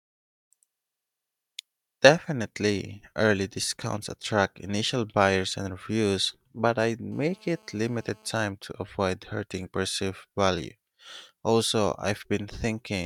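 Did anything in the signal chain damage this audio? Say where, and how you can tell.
Yes. A GSM phone buzz got into the analogue wiring from 7.12 to 8.36 s, between "and reviews but I'd" and "to avoid hurting perceived". It's a hard, raspy 217 Hz buzz with many harmonics, steady, about 32 dB below the speech. A nearby phone's call bursts were rectified by the audio circuit.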